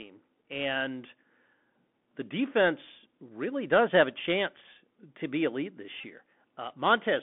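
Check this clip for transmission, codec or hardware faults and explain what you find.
Two faults are present. One runs through the whole clip. One is brief, near the end.

The Bluetooth CVSD headset codec shapes the entire recording. The speech sits in a narrow band of about 150 Hz to 3.5 kHz, which fits a 64 kbps CVSD link. Each sample is coded as a single up-or-down step whose size adapts. Fast, loud high content outruns that step. The damage is plainly audible: scratchy s sounds, distortion on bright peaks, and a granular hiss under the speech.

A Bluetooth headset packet repeated fault occurs from 6.01 to 6.06 s, just after "chance to be elite". About 26 ms of audio was lost, which points to roughly seven dropped packets. The chip replayed the last good packet each time. The 3.75 ms repeat gives a short buzz near 267 Hz.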